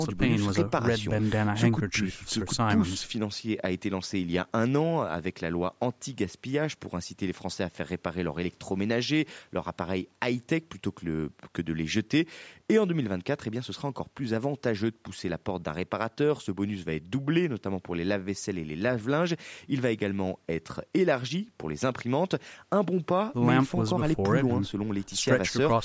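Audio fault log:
No faults found; the speech passes through call microphone processing, with nothing above 8 kHz and the lowest bass removed by the usual high-pass filter.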